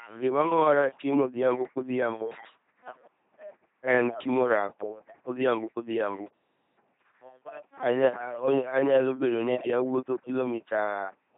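LPC-10 vocoder damage runs through the whole speech clip. Each instant is rebuilt by a short all-pole filter standing in for the vocal tract, driven by either a buzzing pulse train or noise, never a blend, so voices come out as a heavy, mechanical robot tone. Misjudged voicing adds stray buzz or hiss. Nothing sounds above 3.7 kHz, and the coarseness fits a bitrate near 2.4 kbit/s.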